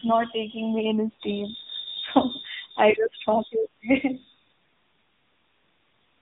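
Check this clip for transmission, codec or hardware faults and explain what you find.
One codec fault runs through the whole recording. AMR narrowband mobile codec damage is plainly audible from start to finish. Nothing above 4 kHz survives, so the speech sounds thin and phone-like. The codec rebuilds each 20 ms frame from a vocal-tract model and a few excitation pulses, leaving a buzzy, synthetic edge that points to a low mode of about 8 kbps.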